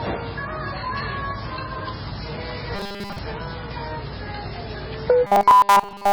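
Right from the start, the whole thing sounds watery and dull, with the treble cut off. That's likely heavy MP3 compression, fitting a very low bitrate around 16 kbps.

From 2.75 to 3.19 s, and again from 5.27 s to the end, it turns into a rigid 200 Hz metallic buzz. That's robotic sound, likely from repeated short buffers: a 5 ms chunk gets looped, covering most of the first stretch and all of the second.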